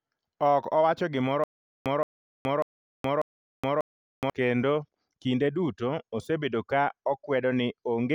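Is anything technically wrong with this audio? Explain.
Yes. From 1.44 s to 4.30 s, just after "owacho gimoro", the speech shows a stutter with silent gaps. A 172 ms burst repeats four times, each followed by 420 ms of digital silence, every 593 ms. A stalled stream likely replayed its last fragment. Normal speech returns at "kendo kinde duto osebedo".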